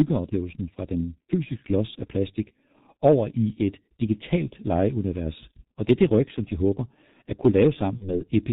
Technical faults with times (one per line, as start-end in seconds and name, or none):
0.00-8.52 G.723.1 codec
7.97-8.14 VoIP packet loss concealed by the speech codec